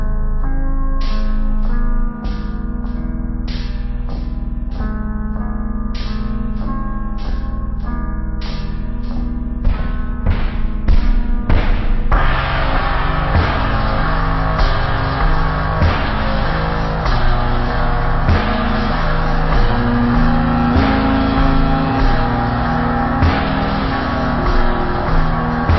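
From start to finish the audio plays drastically slowed and deep, running at roughly a third of its proper speed and sitting about 17.6 semitones low, close to an octave and a half down. This is a wrong sample rate fault: material captured at 44.1 kHz is being played back at 16 kHz with no conversion, so every sample is held longer than intended. Because speed and pitch shift together by that same 0.363 ratio, the whole sound drags and drops in unison.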